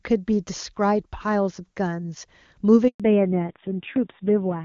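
At 2.88 s the call changed networks and no speech frames arrived for 120 ms. This handover gap cuts the speech to silence until 3.00 s.

From 3.00 s onward, a fallback to narrowband replaces the clean HD Voice codec with a low-rate narrowband one. Everything above 4 kHz vanishes, and the speech turns duller and rougher.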